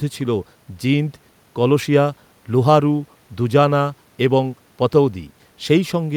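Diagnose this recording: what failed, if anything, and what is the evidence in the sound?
Nothing failed here: I listened for trouble at every stage of the chain and found no evidence of a fault anywhere in the sound.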